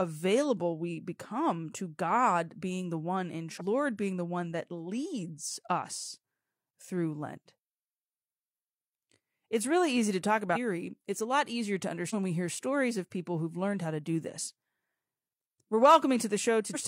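Compressed frames are skipped at 3.56, 10.52, 12.10 and 16.70 s. Missing or rejected 42.7 ms frames make the speech jump ahead by roughly 0.2 to 0.7 s.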